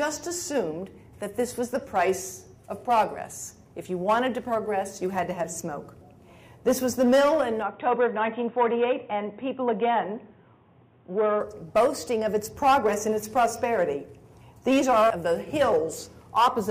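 From 7.62 s to 11.41 s the sound abruptly turns dull and boxy, with nothing above 3.8 kHz, and a faint new background noise appears well below the signal. There is no gap at either switch and the level barely moves. This is likely an input switched to a poorer device. A simple bandwidth drop in processing would narrow the band without bringing a different noise floor and tone, which vanish together at 11.41 s.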